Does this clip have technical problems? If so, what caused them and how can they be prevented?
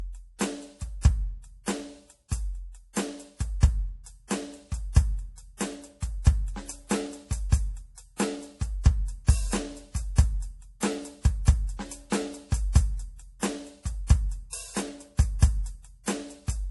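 Yes. MP3 compression artefacts run throughout the music. Nothing remains above about 11.5 kHz, and the damage is plainly audible. This is likely the result of an encoder short of bits, which fits a rate near 48 kbps. The encoder cuts the treble at a fixed frequency and drops weak frequency components. Those components flicker on and off between frames, giving a watery, swirling texture and softened attacks. To prevent it, encode from the original at a much higher bitrate or use a lossless format.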